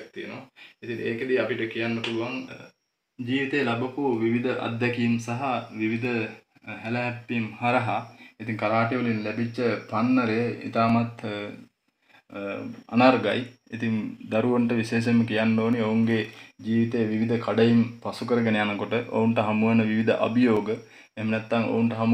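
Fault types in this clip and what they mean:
Clock drift buffer slips: a brief click recurs every 2.42 s from 1.22 s to 20.57 s, about ten times. This is likely two clocks about 150 ppm apart, so a buffer drops or repeats some fifteen samples. The strictly even spacing sets it apart from random dropouts.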